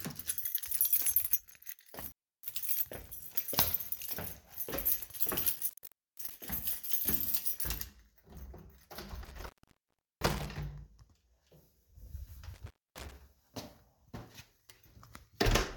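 Intermittent contact cuts the sound at 2.00 to 2.56 s, 5.50 to 6.31 s, 9.24 to 10.46 s and 12.54 to 13.12 s. A loose connection opens for 0.25 to 0.72 s, leaving faint hiss. Crackle at each edge and the irregular gaps distinguish it from clean digital dropouts.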